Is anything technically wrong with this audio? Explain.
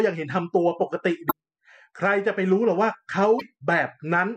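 Yes. Damaged data in a compressed stream at 1.27–1.32 s and 3.36–3.41 s: corrupted bytes make the decoder lose frame sync and resynchronise, leaving brief glitches in the speech.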